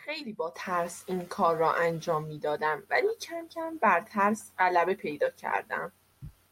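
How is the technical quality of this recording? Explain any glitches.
No technical faults or glitches are audible anywhere in the recording.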